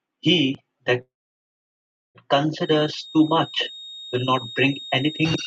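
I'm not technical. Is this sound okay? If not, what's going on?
No, there are two problems here. The first is a call audio freeze at about 1.01 seconds. The speech cuts out and a brief tail of the last sound fades into almost total silence for about a second. At 2.17 seconds it picks up right where it stopped, so nothing is lost. Everything after that simply arrives about 1.1 seconds late. That pattern points to a likely hold-up in the network, where the incoming audio ran dry while the call waited for more.

The second is a feedback whistle starting at about 2.56 seconds and running to the end. It's a thin, steady, high-pitched tone at about 3.7 kHz that sits behind the speech, a good bit quieter than it, swelling and fading slowly in loudness but never building up into a squeal. The likely cause is a loudspeaker on one end being picked up by its own microphone, with the sound looping round and hovering right at the edge of full feedback.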